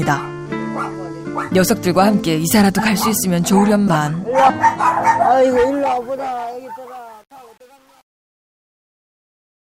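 A short, quiet blip at 0.91 to 0.94 s and a much louder chirp of noise at 3.87 to 3.96 s are two instances of a corrupt frame decoded. Bits inside compressed frames were damaged and the decoder played them anyway, so misread gains and codes put energy at the wrong frequencies. The first burst fits a couple of bad frames and the second a few. From 5.21 s the clip fades out toward 9.61 s, but the tail grows gritty. From about 6.02 s to the end it is at its grittiest. This is truncation distortion on a fade: the fade was computed without dither at a coarse word length, which points to a stage keeping about 8 bits, so the falling waveform collapses into a few square steps.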